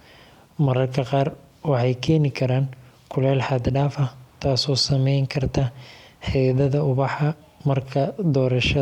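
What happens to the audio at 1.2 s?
Nothing goes wrong at 1.2 s; the speech runs on intact through that moment with no audible fault.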